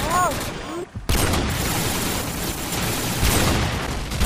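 A brief glitch and skip ahead at 0.82 to 0.85 s, and again at 2.18 s, likely from a broken MP3 bit reservoir after dropped frames.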